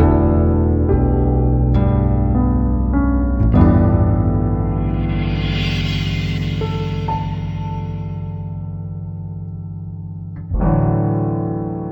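Throughout the clip, stereo is read as mono: the left and right samples are taken one after another as a single channel. Playback therefore runs at 0.5x speed and sits a full octave low, 12 semitones down, with a fainter mirrored image in the upper half of the spectrum.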